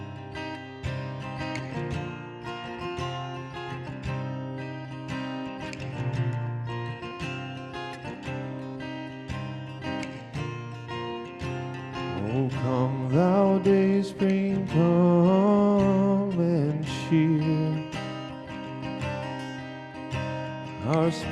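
No dropouts, clicks, distortion or level problems turn up anywhere in the recording.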